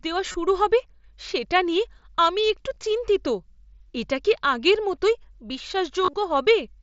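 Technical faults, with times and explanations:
0.32–0.34 s, 2.74–2.76 s and 6.04–6.15 s, concealed Bluetooth headset packet loss: lost packets were filled by repeating the best-matching recent stretch, so each run buzzes briefly, including the last (75 ms scattered over 105 ms). Spectrograms show frozen harmonic stripes, and waveforms show identical repeating cycles.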